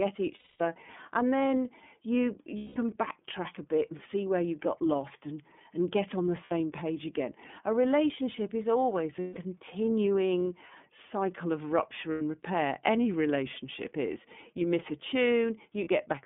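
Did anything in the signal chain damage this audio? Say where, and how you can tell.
Yes. At the codec stage, the whole clip is band-limited to roughly 200 Hz to 3.5 kHz, with nothing reaching past 4 kHz. The speech has a plainly audible rough, synthetic edge. This is the iLBC codec. It codes each 30 ms frame's excitation independently at a low rate, which fits its 13.33 kbps mode. That buys robustness at the cost of naturalness, so the coarse excitation modelling is heard as that grainy, artificial texture.

At the network stage, there are lost iLBC frames at 0.35–0.61 s (240 ms), 2.58–2.77 s (180 ms), 6.44–6.52 s (60 ms), 9.20–9.39 s (150 ms), 12.12–12.21 s (90 ms) and 15.84–15.88 s (30 ms). Each gap is filled with a held, buzzy, breathy vowel-like tone. Each length fits a whole number of 30 ms frames. The decoder concealed each loss by repeating the last pitch cycle mixed with noise, and the longer gaps fade. 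Because each frame decodes standalone, the speech snaps back cleanly right after each gap.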